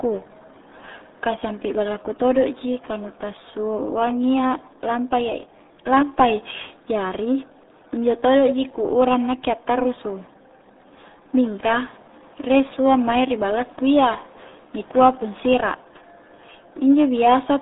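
Throughout, the speech runs through the RealAudio 14.4 codec at a rate that sounds like 8 kbit/s. Nothing survives above 3.8 kHz, leaving it muffled and gargly.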